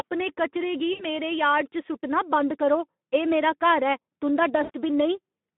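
The whole clip carries Speex codec damage: hoarse, noisy speech squeezed into a 200 Hz to 3.5 kHz line, consistent with roughly 11 kbps. At 0.93 to 1.04 s, right after "कचरे गी", and again at 4.63 to 4.71 s, VoIP packet loss concealed by the speech codec stretches the speech into a buzzy tone or coloured noise that fades. Each time about 60 ms is gone, which fits three lost frames.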